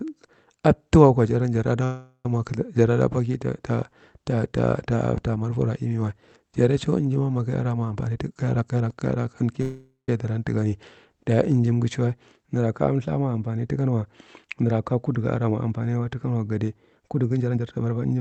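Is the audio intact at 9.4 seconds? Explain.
No. At 9.4 s the sound is inside a jitter buffer speed-up running from 7.88 to 9.52 s. The receiver trimmed repeated pitch-period slices, about 0.3 s in total, so the speech plays at 119% speed with unchanged pitch and sounds hurried. A spectrogram shows compressed syllables with normal harmonic spacing.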